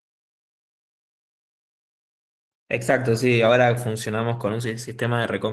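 Opus voice compression runs throughout the speech, with plainly audible damage. The band stays full, but the coarse coding below 8 kHz and the thin layer above it leave a hoarse, slightly robotic texture, which fits a low bitrate around 16 kbps.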